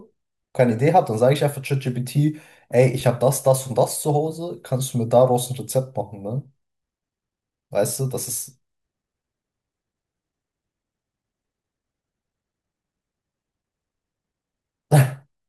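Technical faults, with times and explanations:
No technical faults are audible anywhere in this speech recording.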